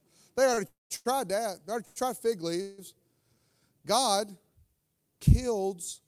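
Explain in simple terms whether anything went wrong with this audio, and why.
Sound packets twice arrived late on their way across the network, causing a short stall from a late packet at 0.54 to 0.59 s and again at 0.96 to 1.07 s. Each time, the receiving end held the last bit of sound for a moment while it waited, so the speech drags briefly with a faint buzz, then carries on with nothing lost.

Three longer waits produced a call audio freeze, likely caused by packets being held up on the network until the receiver's waiting store ran dry. From 0.67 to 0.92 s the held sound fades into silence for most of that time. At 1.85 to 1.98 s, just before "tried fig", and at 2.62 to 2.80 s, just after "already tried fig", it becomes a short buzzy hold. The speech then resumes where it stopped, so a gap is added rather than anything removed.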